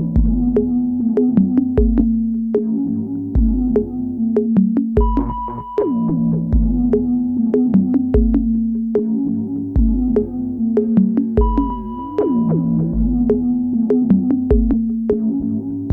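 Compressed frames skipped at 1.99–2.04 s, 6.1 s, 12.93–12.97 s and 14.73 s: the audio jumps ahead by roughly 40, 70, 100 and 200 ms, consistent with whole 20 ms frames lost.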